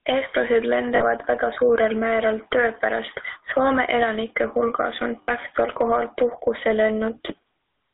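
Throughout, the gain swings by roughly 20 dB as it is pulled down under each loud sound. This gain pumping, likely from input gain set far too high into a fast limiter, differs from noise gating because the noise never cuts out.

Also throughout, the sound has a buzzy, gravelly roughness and is confined to about 300 Hz to 3.7 kHz. That points to the 13 kbit/s GSM full-rate codec, whose damage is rasp on the voice itself rather than merely a narrow band.

From 0.96 to 1.04 s and from 5.22 to 5.29 s, lost GSM frames hold the sound as a brief metallic ring. Those 40 and 60 ms stretches fit two and three lost frames.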